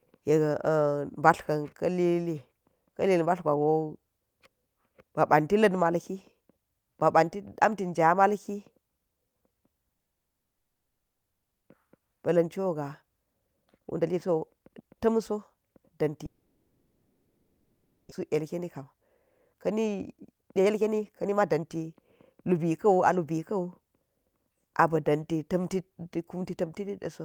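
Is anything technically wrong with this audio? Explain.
Yes. The speech has two kinds of fault, each occurring more than once.

From 9.97 to 11.69 s, and again from 16.26 to 18.13 s, there is what sounds like a long network dropout. The gaps last about 1.7 and 1.9 s. The likely cause is audio that never arrived. The receiver fills each gap itself. The first gap is silent throughout. In the second, it first stretches the last sound, which fades out. Then only silence remains. When the speech returns, about a second of it is gone.

Each dropout is followed by a jitter buffer speed-up. These run from 11.85 to 16.10 s at 115% speed, from 18.21 to 18.95 s at 107%, and from 19.47 to 23.39 s at 120%. Audio piled up while the receiver waited. It then cut out many tiny pitch-period slices to catch up. It removed roughly 0.7 s in each long stretch and a small amount in the short one. The pitch stays the same, but the speech sounds hurried.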